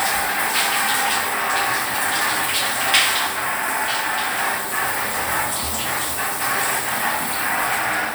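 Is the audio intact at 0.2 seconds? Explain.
Yes, the audio is intact at 0.2 seconds, with no dropout, click, distortion or other fault audible at that moment.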